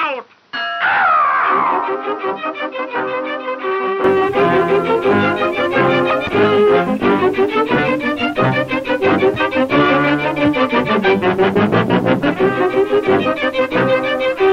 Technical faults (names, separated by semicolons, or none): input switched to a poorer device